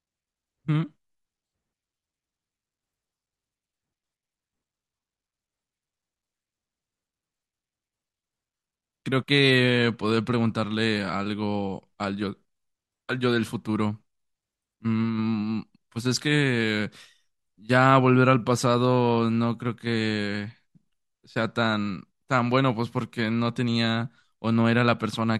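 No technical faults are audible.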